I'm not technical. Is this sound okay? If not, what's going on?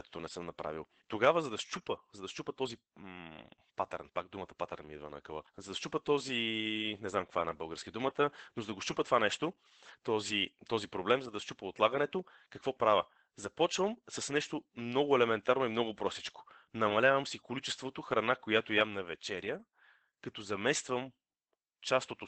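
No. Opus voice compression affects the speech from start to finish. The recording was squeezed hard to save data, so the coder rebuilds the voice from a rough model, leaving it plainly muffled, hoarse and a little robotic.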